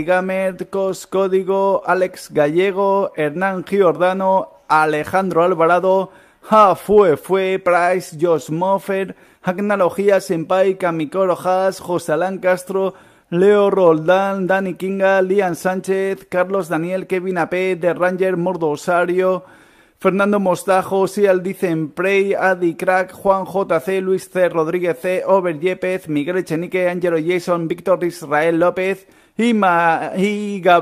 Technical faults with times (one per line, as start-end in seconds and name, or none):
none